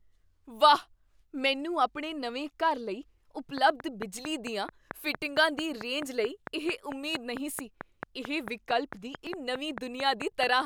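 A speech recording carrying a train of clicks from 3.58 s to 10.44 s, beginning just after "ਆਪਣੇ ਨਵੇਂ ਘਰ ਲਈ". The clicks are regular, at 4.5 per second, roughly thirty in all, and stand around 15 dB above the speech. Their much-the-same shape and steady spacing, audible through the pauses as well, set them apart from a one-off codec glitch and likely point to interference from nearby equipment or a faulty connection or power supply. Separately, at 9.27 s a single glitch marks damaged data in the compressed stream. The decoder loses frame sync there and jumps to the next header, producing one distorted event rather than a repeating tick.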